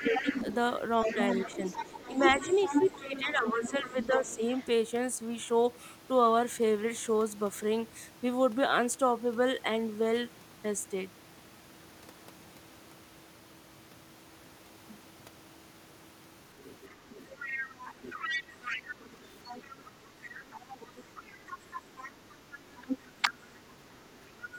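The speech has two related echo problems. A second, fainter voice runs under the main talker from 0.0 to 4.66 s, again from 16.6 to 23.1 s, and in a brief scrap at 24.42 to 24.54 s, sitting roughly 10 dB below the speech and a little lower in that last burst. This is the other side's voice leaking through, likely from a loudspeaker whose output the echo canceller failed to remove from the microphone. Unlike background chatter, it is a single distinct voice that comes and goes with the exchange. In the same regions, the talker's own voice is pushed down while both sides speak: at 0.07 to 0.36 s by a few dB, at 1.06 to 4.4 s by around 10 dB, and at 21.46 to 23.67 s by roughly 15 dB. This is speech suppressed in double talk, likely the canceller mistaking its own talker for echo and attenuating everything. It differs from a plain level drop or network dropout because the dips happen while both sides are talking.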